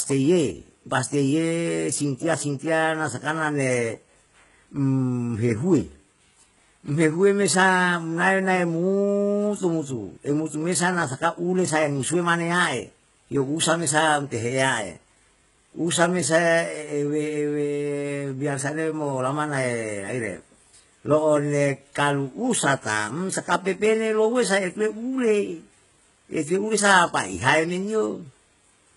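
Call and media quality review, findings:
Speech, whole clip. Treble extends high but sounds synthetic. Sibilants are gritty and lispy, with a metallic sheen. Nothing above 11.1 kHz. Heavy damage. Likely HE-AAC compression: treble rebuilt from copied lower bands, harmonics misaligned across the crossover. Fits a very low bitrate, near 12 kbps.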